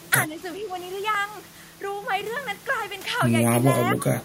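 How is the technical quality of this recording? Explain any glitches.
The recording has two kinds of glitch. Speech suppressed in double talk affects 0.27 to 0.4 s and 0.59 to 0.71 s, dipping about 5 dB. From 3.94 s to the end it drops about 20 dB. The likely cause is an echo canceller turning down both sides during overlap. Clock drift buffer slips appear as roughly three regular clicks between 1.15 and 3.27 s, spaced 1.06 s apart. They likely come from mismatched device clocks forcing small sample drops or repeats.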